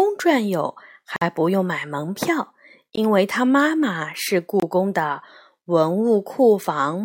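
A speech clip with three brief dropouts to silence. The first starts at 1.16 s and lasts 52 ms. The second comes at 2.96 s and lasts 17 ms. The third starts at 4.60 s and lasts 25 ms. Each time the sound simply stops, then carries on. The likely cause is a Bluetooth stall. Radio interference delayed packets, the headphones' buffer emptied, and playback halted until the missing data came through.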